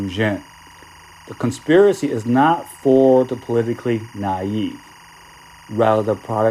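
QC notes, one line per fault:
Throughout: timecode bleed. A chirping warble sits around 30 dB below the speech, switching between tones near 1 kHz and 2 kHz, an octave apart. Its pattern repeats about 24 times a second, which fits 23.976 fps linear timecode leaking in from an adjacent track or cable.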